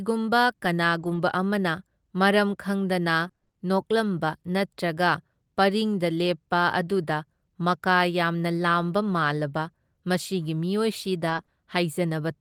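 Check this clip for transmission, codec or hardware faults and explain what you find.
Packet loss, concealed in two different ways, affects two stretches of this speech clip.

From 0.99 to 3.55 s there are scattered short gaps, roughly seven, none longer than about 20 ms. Each time, the receiver extended the preceding sound to cover a late or missing packet. The result is brief ticks and hiccups in otherwise clear speech. On a spectrogram, short smeared vertical slices break the harmonic lines.

From 11.25 to 11.39 s, about 80 ms was a lost packet rebuilt from error correction. The loss involved four separate packets. The decoder played the low-bitrate backup copies carried in the packets that followed, so nothing drops out, but the sound turns rougher and noisier. The spectrogram shows blurrier harmonics and extra noise between them.

Right after that comes short concealed packet loss at 11.41–11.45 s and again at 11.45–11.49 s, each 20 ms. 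With no backup copy available, the receiver continued the last sound's pitch or noise shape and then blended back into the real audio. It is heard as a quick wobble or smear.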